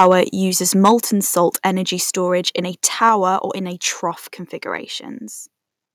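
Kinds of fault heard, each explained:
Microphone overload: The tops of the loudest peaks are sheared flat, which gives them a harsh, crackly edge. This happens at the start, at 0.85 s before "salt energy", and from 2.85 to 3.06 s. The first two overshoot by about 4 dB. The likely cause is microphone input gain set too high.
Microphone volume stepped down: Voice and background drop together in one sudden step. The drops come at 1.02 s, 2.04 s and 3.09 s, by about 3, 2 and 3 dB. The last comes just after a distorted peak. Call software likely lowered the input gain each time.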